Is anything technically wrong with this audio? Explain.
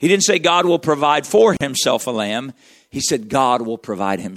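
Yes, there's a gap at a join of encoded pieces from 1.57 to 1.61 s. The speech drops into roughly 40 ms of silence with smeared edges, then resumes where it stopped. Two separately encoded chunks were joined without trimming the encoder's lead-in delay and end padding.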